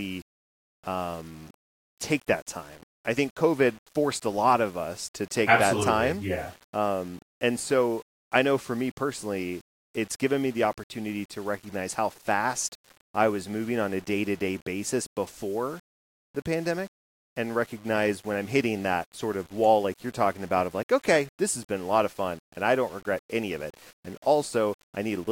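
Throughout the speech there is low bit depth without dither. Grainy distortion tracks the voice, roughening quiet passages and dropping to silence or sputtering in near-silent gaps, with error sitting around 30 dB below the speech. This likely comes from rounding to about 8 bits without added dither noise.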